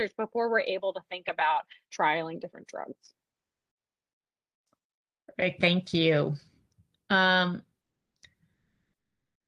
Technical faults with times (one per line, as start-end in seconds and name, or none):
8.53-9.47 comfort noise in place of the background